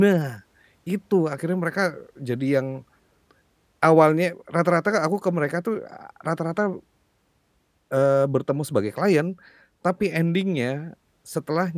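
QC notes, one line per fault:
No faults heard in this speech recording.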